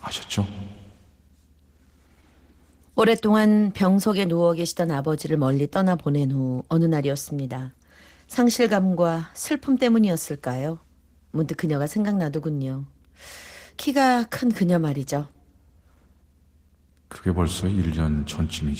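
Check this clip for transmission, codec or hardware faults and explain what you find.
Opus voice compression runs through the whole speech clip: a SILK core with a coarse CELT layer above 8 kHz makes the voice hoarse and slightly robotic, unlike plain band-limiting. The damage fits a bitrate around 16 kbps.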